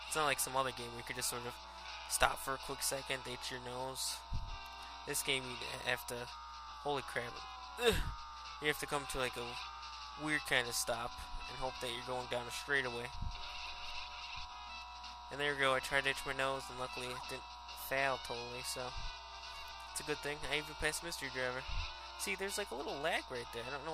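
Nothing is technically wrong with this clip.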